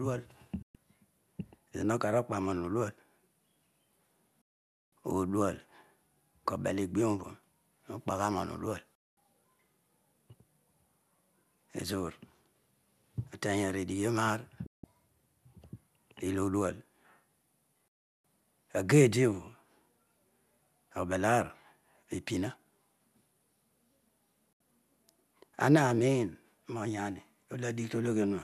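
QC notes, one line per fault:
0.62 to 24.61 s, digital broadcast dropout, six times: at 0.62 s (120 ms), 4.42 s (about half a second), 8.95 s (216 ms), 14.66 s (168 ms), 17.88 s (360 ms) and 24.53 s (72 ms). Each time the speech fades to silence within about 3 ms and resumes later, as the receiver mutes on corrupt or missing frames. What was broadcast during each gap is gone. The gap lengths all fall in steps that fit 24 ms frames.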